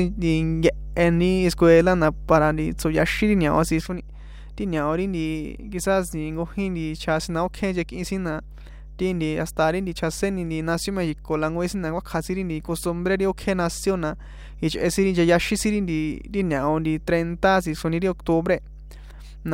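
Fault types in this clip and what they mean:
Mains hum: A steady low 50 Hz tone sits under the speech for the whole clip, fairly prominent at roughly 15 dB below it. That's the power line leaking into the signal, probably through a ground loop or a transformer sitting too close.
Sudden gain jump: At 3.81 s the level abruptly falls by about 6 dB and stays down to the end, speech and background noise together. There's no fade, so the likely cause is a digital gain setting applied instantly instead of ramped.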